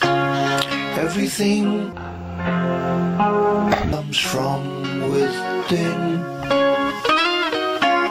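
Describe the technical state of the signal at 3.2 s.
At 3.2 s the signal is in a stereo-read-as-mono section running from 1.93 to 3.93 s. Interleaved left and right samples are taken as one channel, so the sound plays at half speed and a full octave low. On a spectrogram the content sinks and stretches out in time.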